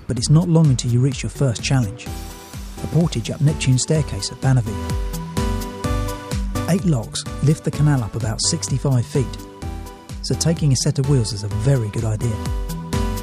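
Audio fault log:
No faults were found in this audio. Nothing in the sound calls for a timed entry in the log.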